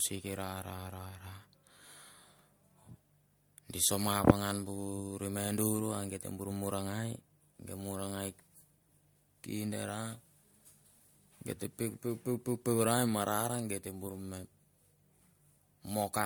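Across the whole clip the speech sounds swirly, smeared and hollow, with consonant attacks blurred, more than a single encode would explain. This is generation loss, likely from repeated MP3 encoding, roughly three passes at what sounds like 96 kbit/s, each adding fresh quantisation damage.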